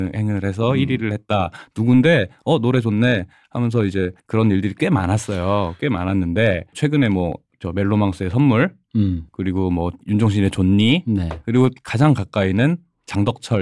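Nothing in the recording stood out as a technical problem on listening.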